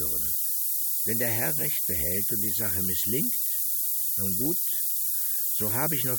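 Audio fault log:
throughout: low bit depth with noise shaping. Just 3 bits. Rounding error is pushed upward, leaving a thin hiss around 10 dB above the sound, brightest up top.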